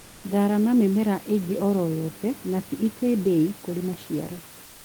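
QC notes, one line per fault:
0.00–0.23 s and 4.67–4.85 s, comfort noise in place of the background: the room noise under the speech becomes a smooth, featureless hiss about 2 dB quieter, likely because the sender paused transmission during silence, as Opus DTX does, and the receiver synthesised filler noise.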